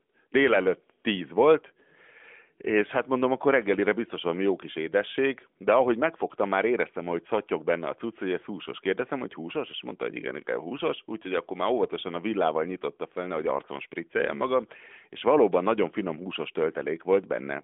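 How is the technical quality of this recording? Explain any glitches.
No glitches can be heard: the speech arrives through the AMR narrowband mobile codec, its sound consistent with the 12.2 kbps mode, confined to a telephone band of about 200 Hz to 3.5 kHz with nothing above 3.7 kHz, and nothing disrupts the signal at any point.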